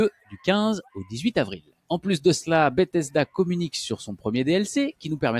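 A noise suppressor meant for speech has been left running on this sound, and it treats steady tones and tails as noise. The level swings by around 10 dB as held material sinks while attacks pass, which sets it apart from a noise gate that would shut off fully between events. Two spans of sound are cut harder by the noise suppressor, from 0.11 to 0.47 s, dipping by about 16 dB, and from 1.59 to 1.9 s, by about 21 dB. Each dip lasts a few hundred milliseconds and pulls sustained and decaying content down while onsets come through, unlike a dropout, which would silence everything in that span.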